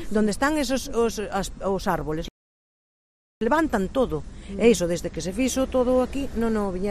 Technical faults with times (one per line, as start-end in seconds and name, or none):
2.28-3.41 playback stall